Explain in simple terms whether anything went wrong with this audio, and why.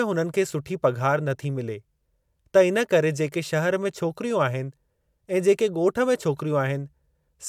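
Listening closely to the recording, nothing stood out as having gone wrong with the speech.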